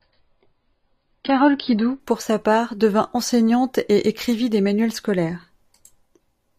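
Speech that opens on an adaptive stream starting at a low bitrate: from 0.0 to 2.0 s nothing sounds above 5.2 kHz and codec artefacts are stronger, which fits roughly 16 kbit/s AAC. At 2.0 s it jumps to 96 kbit/s AAC with no gap, unlike a mid-stream network dropout.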